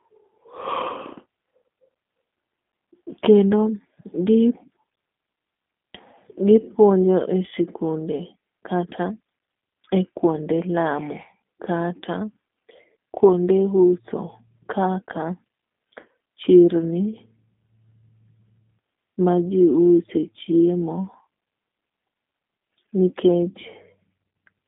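From start to finish the speech carries the signature of the G.729 codec, consistent with the G.729A variant at 8 kbit/s. The coder rebuilds each 10 ms frame from a vocal tract filter, a pitch predictor and a few pulses, so the speech sounds plainly rough and synthetic. The band is limited to a telephone line, roughly 200 Hz to 3.5 kHz, with nothing above 3.6 kHz, which dulls sibilants and removes air.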